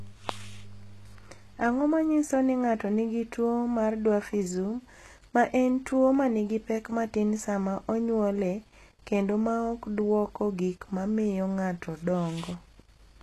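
HE-AAC compression runs throughout the speech, and the damage is plainly audible. The likely cause is a low-rate HE-AAC encode, which fits a bitrate around 16 kbps: only the lower band is truly coded, and the treble is rebuilt by copying lower bands upward under a coarse envelope. That synthetic top has harmonics that fail to line up with the real ones below, so s sounds come out gritty and lispy, and nothing remains above 12.3 kHz.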